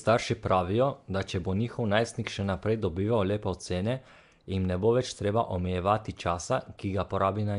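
Speech, and the whole way through it carries that rough, hissy halo and smeared underwater feel, with nothing above about 10.6 kHz. That's plainly audible codec damage, likely Nellymoser compression, the old Flash mic codec, at a rate that sounds like roughly 44 kbps.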